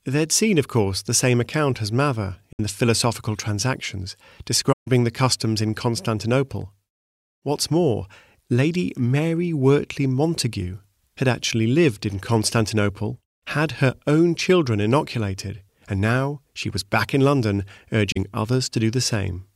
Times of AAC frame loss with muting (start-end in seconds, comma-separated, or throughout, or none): 2.53-2.60, 4.72-4.88, 18.12-18.17